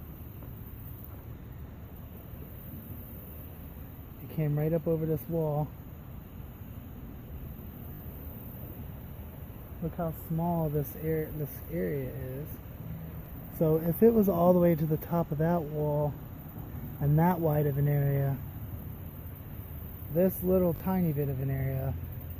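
Repeated buffer stutters show up four times in the audio. Around 7.94 to 8.00 s, a tiny slice plays three extra times with hard joins and drops roughly 70 ms. Single repeats follow at 11.38 s and 13.26 s, and a double repeat at 20.76 to 20.80 s. Playback ran dry and looped a chunk that fits a 20 ms buffer.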